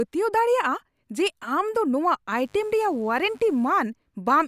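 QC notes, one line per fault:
2.33 to 3.83 s, mains buzz: a raspy buzz comes in under the speech for about a second and a half, then drops out again. It sits well down, roughly 35 dB under the speech. It's built on 50 Hz mains: sharp switching spikes arrive twice per cycle, so 100 times a second. Those spikes carry harmonics well up into the kilohertz range, which is why it rasps rather than hums.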